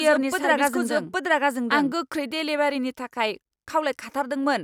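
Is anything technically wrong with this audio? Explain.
Yes. From the very start up to 1.92 s there's a doubled audio track: the speech plays twice, with a second full-band copy trailing about 0.7 s behind and roughly as loud as the original. It's likely a second capture of the same signal through a slower path, or an edit leaving two copies out of step. The copy has no decay or room colour, so it sounds like overlapping speech rather than an echo, and it cuts off abruptly at 1.92 s.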